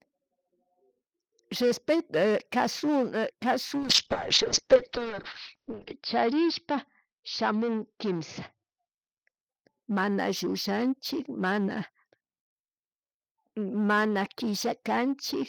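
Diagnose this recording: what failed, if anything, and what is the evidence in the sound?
Call bitrate drop at the codec stage, 3.78–9.50 s: the encoder fell from 48 to 8 kbps, so the spectrogram's ceiling drops from 20 to 6 kHz and speech turns muffled.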